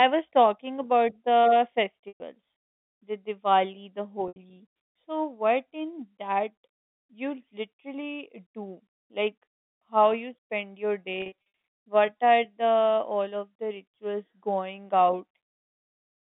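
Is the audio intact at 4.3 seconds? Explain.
No. Packet loss with pitch repetition hits from 4.28 to 4.36 s, about 80 ms missing, which fits four 20 ms packets. The receiver repeats the last pitch period, so a held, buzzy tone fades over about 50 ms into silence before the speech cross-fades back in.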